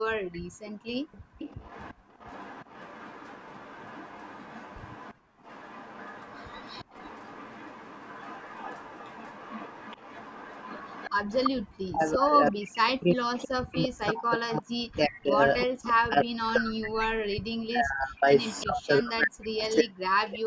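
From 0 to 2.17 s the room sound behind the speech dips and drops away, by about 40 dB at its deepest, for around a second and a half in total. This is background gated by the echo canceller, which clamped the microphone hard while its loudspeaker played. The same brief hole in the background returns from 5.14 to 5.43 s.

From 0.33 to 11.49 s a faint delayed copy of the speech trails 344 ms behind, roughly 25 dB under it. This is echo leak, likely a loudspeaker-side echo canceller letting part of its microphone pickup through and sending it back.

From 11.67 s to the end, the talker's speech sinks, thins and breaks into pieces while the other side is talking, with the deepest cuts around 40 dB and some seven seconds affected in all. This is speech suppressed in double talk, likely the echo canceller turning everything down because it could not separate the local talker from the loudspeaker echo.

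Within that stretch the 344 ms echo comes back in scraps: 12.75–13.89 s and 15.6–15.93 s at about −15 dB, 18.37–18.63 s at about −20 dB, and 19.71–20.31 s at about −30 dB.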